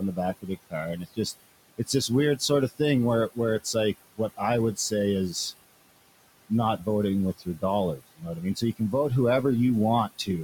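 Noise suppressor artifacts run through the whole speech clip: the suppressor pulls the steady room noise, which sits about 17 dB under the speech, down by about 20 dB frame by frame, so the background dips in the pauses and swells back under each phrase. Speech cut by the noise suppressor occurs at 0.00–1.19 s, 1.78–2.80 s, 3.34–5.53 s and 6.49–8.93 s. There the suppressor treats quieter stretches of speech as noise and drops them by about 17 to 21 dB, swallowing soft consonants and word endings for roughly 150 to 300 milliseconds in each of the first three spans and roughly half a second in the last.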